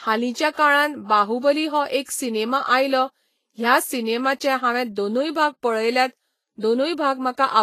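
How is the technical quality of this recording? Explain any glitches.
The recording has one problem, and it runs from start to finish.

The whole clip has plainly audible codec damage, most likely from Vorbis compression. Nothing gets through above about 14.2 kHz, and the treble just under that cut-off turns hissy and grainy. At a low setting, the encoder codes a smooth spectral envelope and then quantises the fine high-frequency detail so coarsely that it comes out as noise of similar energy. Consonant attacks blur and tones sound roughened, which fits a low bitrate of around 31 kbps.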